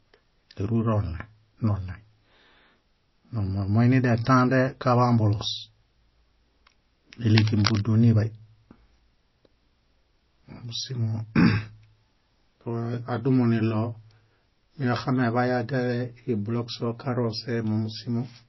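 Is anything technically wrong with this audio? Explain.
Yes. The whole clip has MP3 compression damage that's plainly audible, most likely from encoding at a low rate; 24 kbps would fit. Nothing survives above 5.8 kHz, and the encoder starving weak frequency lines leaves the speech watery and swirly, with chirpy s sounds and smeared attacks.

From 7.36 to 7.83 s there's cable scratch noise: a burst of scratchy, rustling noise sitting not far below the speech level. It's likely a worn cable or connector being moved, its contact resistance jumping around and spraying uneven noise into the signal.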